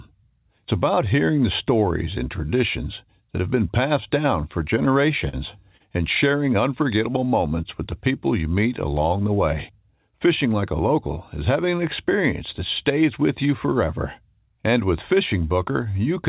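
At 5.29 s and again at 5.77 s there is a short stall from a late packet. The jitter buffer ran empty, so the last sound was stretched for 44 ms, then 29 ms, before playback resumed with nothing lost. Each stall is a brief hold with a slight buzz or dip. On a spectrogram it shows as flat, repeated bands below the 4 kHz ceiling, and on the waveform as a regular, repeating cycle.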